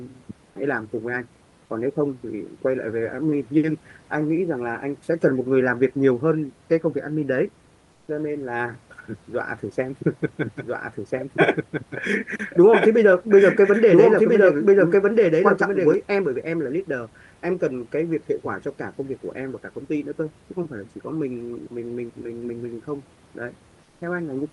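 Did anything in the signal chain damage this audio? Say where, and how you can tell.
Yes. From 7.91 to 8.07 s and again from 23.83 to 24.01 s, the real room noise (about 36 to 40 dB below the speech) gives way to a smooth, featureless hiss about 3 dB quieter. These are comfort noise in place of the background, a codec-stage fault, likely from Opus DTX. The sender goes quiet in pauses, and the receiver fills the 160 and 180 ms gaps with synthetic noise.

From 10.42 to 15.94 s a doubled audio track runs under the speech. A second full-band copy at roughly equal level trails by about one and a half seconds, with no decay or room colour, and it switches on and off abruptly at those points. That points to the capture or call-processing stage, likely a slower second path feeding the same audio into the mix.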